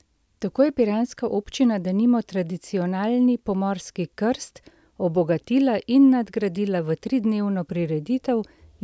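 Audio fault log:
No faults heard anywhere in this speech recording.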